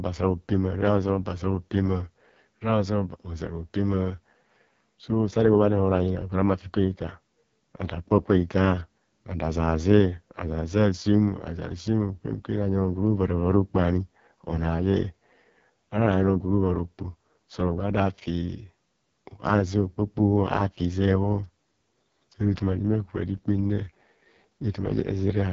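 From start to finish the speech carries heavy AMR wideband (HD Voice) codec damage, rough and raspy in a way that fits its lowest 6.6 kbit/s mode. A spectrogram shows harmonics smeared into noise and nothing above 7.5 kHz.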